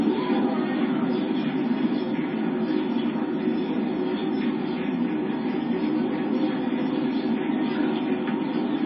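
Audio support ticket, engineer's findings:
Likely MP3 compression at a starved bitrate, around 24 kbps. Nothing above 5.6 kHz throughout. Weak lines toggle frame to frame, giving watery, swirly texture and smeared attacks.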